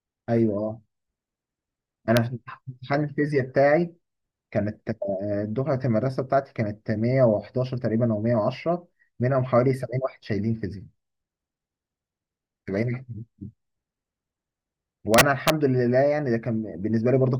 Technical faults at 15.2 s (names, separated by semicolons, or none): integer overflow